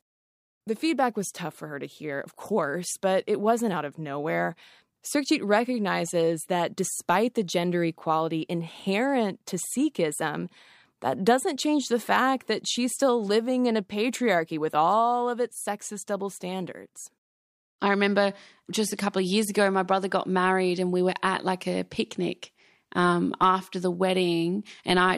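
A speech recording with no technical faults to report in its signal at any point.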